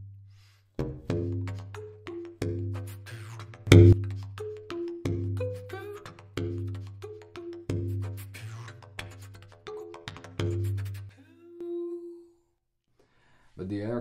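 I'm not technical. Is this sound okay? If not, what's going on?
No. A sudden gain jump: loudness leaps up at 3.67 s and drops at 11.09 s, likely an instant volume change. The background noise shifts with it, unlike a fade.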